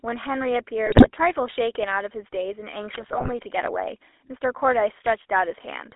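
GSM full-rate codec coding runs through the whole speech clip. The voice has been reduced to a vocal-tract filter driven by coarse, regularly spaced pulses, which gives it a buzzy, gravelly roughness. Nothing passes outside roughly 300 Hz to 3.5 kHz, consistent with a 13 kbps GSM link.

GSM bit errors strike from 0.86 to 1.08 s and again from 2.94 to 3.30 s. Corrupted bits reached the decoder and scrambled the filter, pitch and gain values frame by frame, so the voice breaks into squawks, pops and gargling. The damage suggests an error rate of around 3 to 4 percent.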